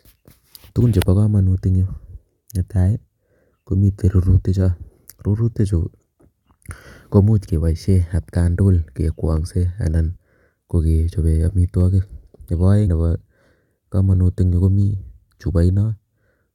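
Speech, with three brief smeared blips where the sound lurches forward: at 4.25 s, at 10.15 to 10.17 s between "at kaang'tugul kekwang'se anan" and "kokechobe amitwogik", and at 12.87 s. These are compressed frames skipped. Roughly 20, 50 and 100 ms go missing, which points to about one, two and five 23.2 ms frames dropped, and the overlap between neighbouring frames blurs each join.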